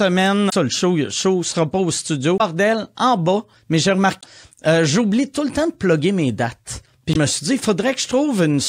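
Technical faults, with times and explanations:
0.49–0.53 s, 2.37–2.41 s, 4.20–4.24 s and 7.12–7.16 s: damaged data in a compressed stream. Each lasts roughly 40 ms. The first comes just before "le show le show", the second between "show sera pas au" and "en bas mais j'ai", and the third right before "euh j'oublie tout". Corrupted bytes make the decoder misread frames and lose sync until it finds the next frame header. That produces a brief glitch where the damaged frames were.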